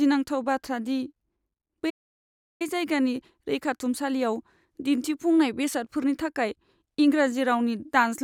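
At 1.89 s the speech cuts out mid-flow and the output stays silent until 2.62 s, a gap of about 0.70 s. This is a playback stall: the silence sits inside continuous speech rather than at a natural pause, which points to the player having likely run out of buffered data or had its output thread blocked. When sound returns, the speech resumes after the dead interval.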